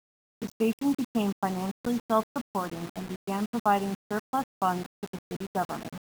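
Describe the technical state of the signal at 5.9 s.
At 5.9 s the speech has the same grainy, gritty edge it carries throughout the clip: low bit depth without dither, likely from rounding to about 5 bits. The rounding error tracks the signal, so quiet bits crackle or sputter, with distortion only around 20 dB down.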